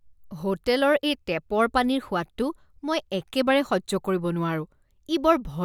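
No technical faults can be heard anywhere in this speech recording. There is no event in it that needs a time or an explanation.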